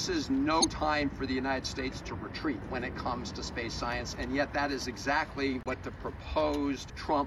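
At 0.61 s a short, harsh burst of noise and chirp-like squeak cuts across the audio and lasts until 0.69 s, peaking at roughly -15 dBFS. This is a corrupt frame decoded. Bits inside the compressed data were flipped, and the decoder played those frames anyway. Misread gain values and codes put energy at frequencies where it doesn't belong, for a span that points to about three consecutive damaged frames.

At 5.63 s the audio drops abruptly into dead silence, and the hole lasts until 5.74 s, about 108 ms. This is a corrupt frame muted. Flipped bits made the decoder reject the damaged frames, and the player inserted silence in their place. The length fits three lost frames of roughly 36 ms each. Timing is preserved, so the sound resumes exactly where it would have been.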